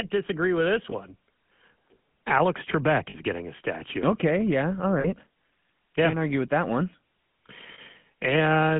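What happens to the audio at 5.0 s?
Lost GSM frames hit from 5.0 to 5.07 s, just after "yeah all". About 40 ms goes missing, which fits two dropped frames. The decoder repeats the last good frame, so the sound holds as a brief rough, metallic ring. Underneath, the GSM full-rate codec keeps its plainly audible buzzy, gravelly roughness, with the band limited to 150 Hz to 3.4 kHz.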